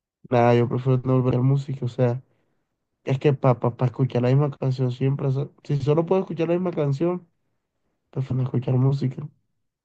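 Speech with two places where compressed frames are skipped: at 1.30 s about a third of a second of audio vanishes, and at 8.30 s roughly a tenth of a second. Each is an abrupt jump forward in the speech. The amounts point to around ten and four dropped frames. On a spectrogram, each shows as an abrupt discontinuity in the harmonic tracks at the splice.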